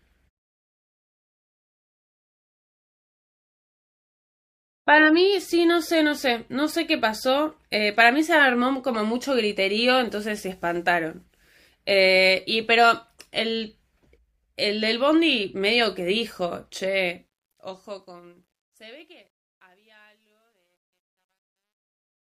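From 16.8 s the fade-out carries truncation distortion: undithered gain reduction, consistent with 12-bit words, makes the tail gritty, worst after 18.94 s.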